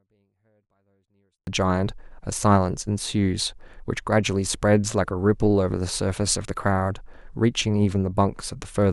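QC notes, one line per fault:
0.00–1.47 s, 24-bit alignment error (too quiet): the opening speech is clean but sits about 48 dB down, barely audible, because 24-bit samples held in the low bytes of each 32-bit word were read as full 32-bit integers, scaling everything by 1/256.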